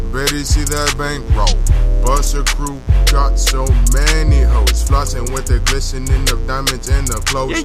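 From start to finish, switching spikes from something like a dimmer, a rectifier or an unshielded cable are leaking into the signal path twice in every cycle of a 60 Hz mains supply. That produces mains buzz: a stack of 60 Hz harmonics reaching up into the kilohertz range, sitting around 20 dB below the wanted sound. It comes across as a steady, raspy buzz that never lets up underneath the audio.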